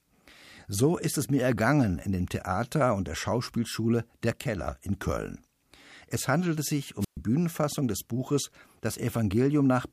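At 7.00 s, just after "handelte sich", the wireless microphone's radio signal faded and the receiver squelch muted it: a wireless microphone squelch dropout, heard as brief hiss then a 124 ms hole of near silence before speech returns at 7.17 s.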